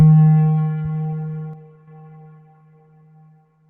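Short concealed packet loss occurs from 0.83 to 0.87 s. A stretch of audio arrived too late to be decoded, leaving a hole of about 20 ms, and the receiver bridged roughly 14 ms of it by extending the preceding sound before crossfading back into the real signal. What you hear is a brief smear or wobble. The continuity is faked rather than genuine, so the detail that belonged in that gap is simply gone.

One channel drops out from 1.53 to 1.88 s. For about a third of a second, the overall level falls abruptly by about 6 dB and then recovers just as suddenly. That is the drop you get when one side of a stereo pair goes silent and the remaining channel is summed to mono, so the likely cause is a lost stereo channel. The material in the remaining channel survives at half amplitude.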